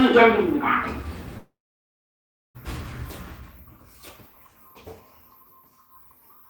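From 1.37 s to 2.57 s the sound cuts out in what is likely a long network dropout. The last sound is briefly stretched into a fading buzz or hiss, then about 1.0 s of silence follows. Roughly 1.2 s of audio never arrives, and playback resumes past the gap.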